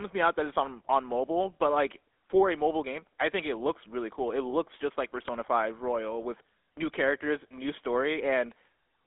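Throughout the speech, GSM full-rate codec damage is plainly audible as a buzzy, gravelly roughness, fitting a 13 kbps coding. Regular-pulse excitation rebuilds the voice crudely. A spectrogram shows energy confined between 250 Hz and 3.6 kHz, with smeared, grainy harmonics.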